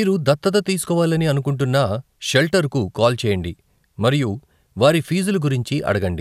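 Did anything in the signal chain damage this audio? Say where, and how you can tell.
No, no damage is audible.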